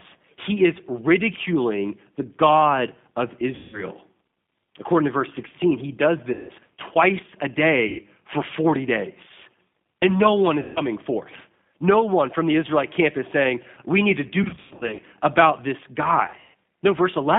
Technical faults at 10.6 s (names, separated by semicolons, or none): G.729 codec; VoIP packet loss concealed by the speech codec